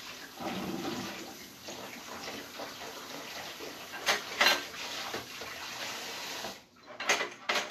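From start to finish there's nothing above 14.2 kHz, and the treble comes through hissy and grainy, with roughened tones and smeared attacks. That's likely Vorbis compression at a low setting, coarsely quantising the top end into noise, which fits a bitrate around 35 kbps.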